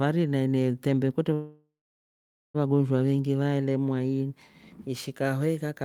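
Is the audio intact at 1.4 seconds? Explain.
No. A call audio freeze runs from 1.33 to 2.56 s. The last sound stretches into a fading buzz or hiss, then about 0.83 s of silence. Packets were likely delayed. Nothing is lost.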